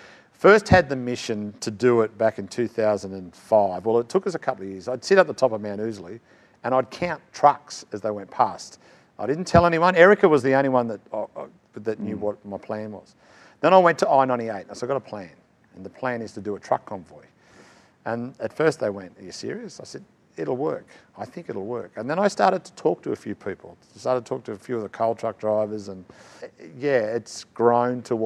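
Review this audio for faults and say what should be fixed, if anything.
No faults; nothing needs fixing.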